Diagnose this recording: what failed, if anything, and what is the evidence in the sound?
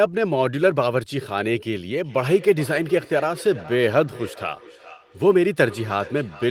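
Call processing failed with feedback echo between two devices, each canceller ignoring the other's playback. From 2.04 s, speech returns roughly 0.4 s later, about 19 dB down.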